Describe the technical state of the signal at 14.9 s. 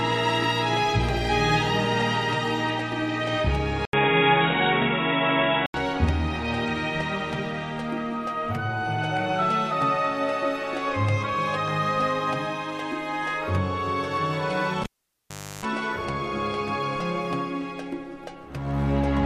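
At 14.9 s the signal is in the middle of a cable pulled and plugged in event, running from about 14.83 to 15.65 s. A live lead gets yanked out: there's a pop, then roughly 0.77 s of near silence while it's disconnected. On the way back in, the tip touches before the connector seats, so you get about 0.33 s of 50 Hz mains buzz, then a second pop as the sound returns.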